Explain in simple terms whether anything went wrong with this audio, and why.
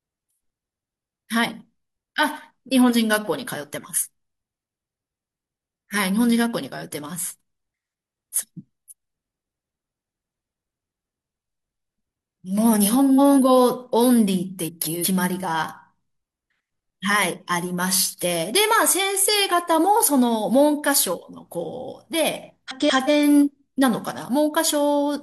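Frames out of order at 10.45–10.82, 11.71–11.99, 13.00–13.39, 14.65–15.06 and 22.69–23.10 s: in each spot, two back-to-back chunks of speech (about 0.19 s each, 0.14 s at 11.7 s) played swapped, causing a brief garbled flutter. Nothing is missing.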